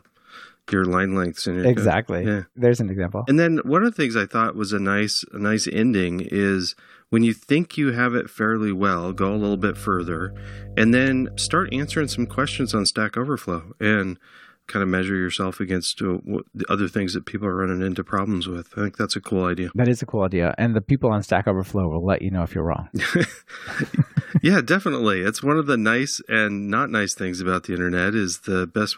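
Mains hum runs through this speech recording from about 9.11 s to 12.86 s, a steady low tone at 50 Hz, roughly 15 dB below the speech itself. It comes from the power line leaking into the signal path, through a ground loop between connected pieces of equipment or through magnetic pickup from a nearby transformer. Because it appears and disappears within those few seconds, the coupling was present only for that stretch.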